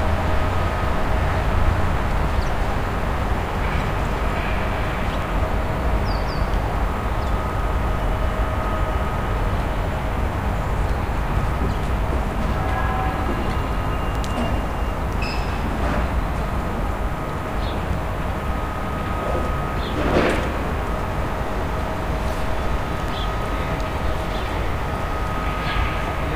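At 2.25, 5.22, 14.15, 20.11 and 23.08 s the sound skips forward, losing roughly 20 ms each time with the two sides butted together. The events line up on a 3 s grid, so this is likely audio missing between chunks as the recorder moved from one block to the next.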